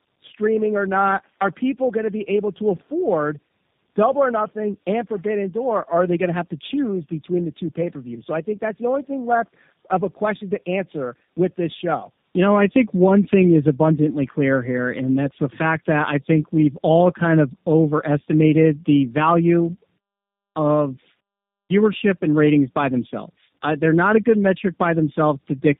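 From start to finish the speech carries tandem speech coding: it has passed through two low-rate speech codecs in a row, the second re-coding the already degraded output of the first. The result is rougher, more muffled and more warbly than a single coding pass, with nothing above 3.7 kHz. The character fits an AMR-NB stage at 7.95 kbit/s followed, across a 64 kbit/s G.711 A-law link, by G.729A at 8 kbit/s.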